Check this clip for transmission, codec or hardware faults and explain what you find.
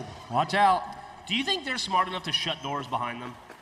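Nothing in this clip stood out on listening.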